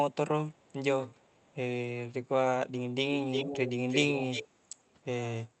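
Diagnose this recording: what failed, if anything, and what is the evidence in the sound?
Echo leak in call processing at 0.52–0.73 s and 1.07–1.56 s (faint, 433 ms behind the speech), then at 3.31–3.72 s and 3.88–4.48 s (nearly as loud, 339 ms behind). This is likely a loudspeaker end whose echo canceller passed its own playback back.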